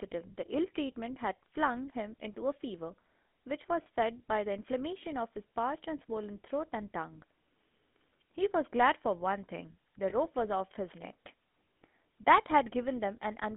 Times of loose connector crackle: none

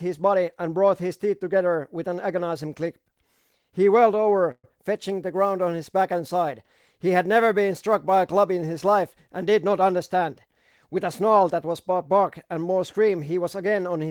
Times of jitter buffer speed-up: 9.52-11.65

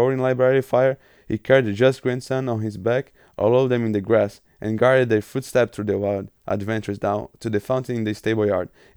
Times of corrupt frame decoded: none

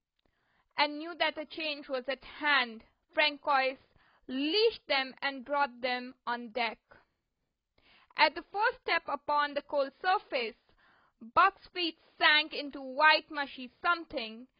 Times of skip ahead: none

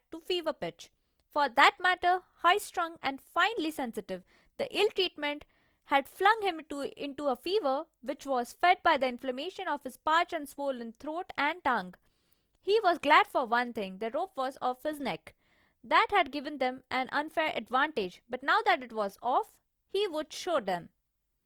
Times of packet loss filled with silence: none

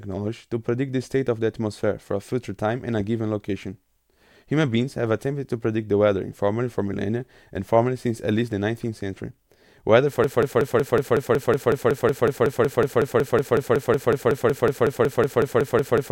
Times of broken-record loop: 10.24-16.12

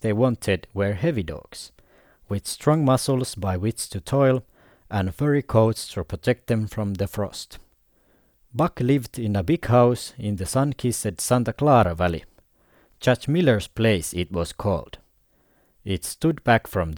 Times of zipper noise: none

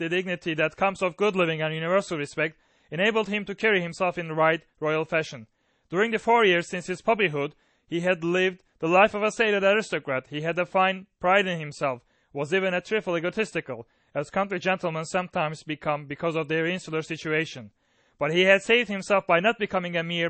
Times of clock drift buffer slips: none

